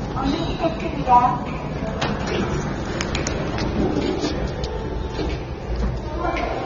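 From start to finish the sound is plainly dulled and smeared, with nothing at all above about 7.6 kHz. That points to AAC compression, most likely AAC-LC at a low rate, something like 24 kbps. At that rate the encoder can't afford the upper bands, so it drops the cut-off and spends its few bits on the lower spectrum it judges most audible. The codec damage is easy to hear: a muffled top end across the whole clip and a grainy, processed texture on sustained sounds.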